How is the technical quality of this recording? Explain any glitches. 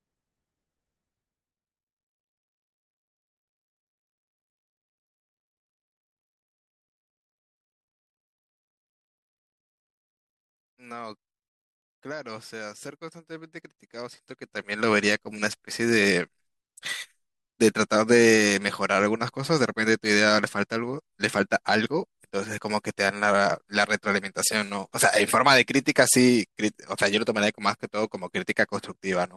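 One glitch stands out: zipper noise from 14.03 to 14.89 s. A level change of about 15 dB was applied in unsmoothed jumps of about 2 dB, around ten per second, instead of as a continuous ramp. Each jump puts a small click into the speech, so the level move carries an audible ticking.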